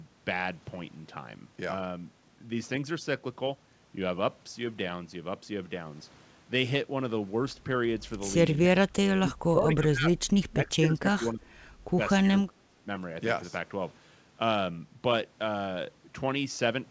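From 8.53 to 10.29 s, 10.48 to 11.51 s, briefly at 11.96 to 12.00 s, and 12.22 to 12.87 s, the speech drops away in pieces, likely speech suppressed in double talk. The echo canceller apparently mistook the talker for returning echo while the far side spoke and pulled both down, by about 30, 20, 5 and 25 dB respectively. On the waveform these appear as sudden hollows in the envelope. On a spectrogram they show as faded vertical bands under the band edge at 8 kHz, where the wideband call codec stops.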